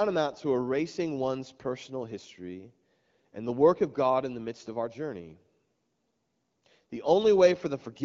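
Speech, with no technical faults to report.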